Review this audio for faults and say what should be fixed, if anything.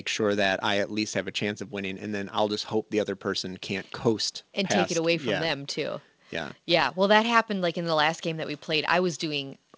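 Nothing here needs fixing. The call path shows up as a band limit with nothing above 8 kHz, which fits a G.722 wideband link.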